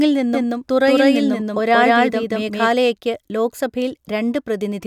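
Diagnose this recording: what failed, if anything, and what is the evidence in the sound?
A doubled audio track runs from 0.34 s to 2.72 s. A second full-band copy of the speech trails the original by around 200 ms at roughly the same level, with no decay or room colouring, and it switches on and off abruptly at those two points. The stage is likely capture routing, where the same signal reaches the mix a second time through a slower path, leaving two identical copies out of step.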